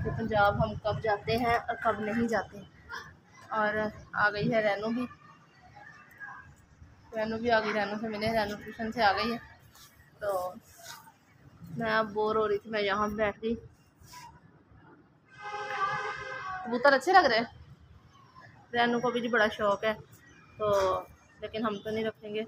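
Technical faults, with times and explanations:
13.13–16.88 s, de-emphasis applied wrongly: an unneeded treble cut rolls off highs smoothly, about 14 dB down at 10 kHz versus 1 kHz, muffling the sound; spectrogram shows dimmed upper bands.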